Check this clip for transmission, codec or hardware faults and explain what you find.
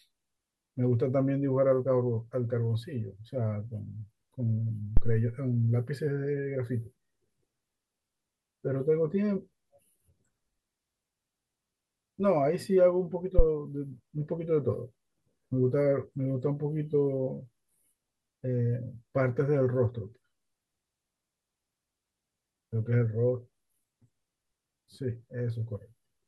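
The speech carries two phantom power thumps, one from 4.97 to 5.26 s peaking at about -8 dBFS and one from 13.39 to 13.45 s at about -7 dBFS. A supply switching on or off on the live input sends a voltage step through the coupling capacitors, heard as deep low thumps that die away within 66 ms and 15 ms.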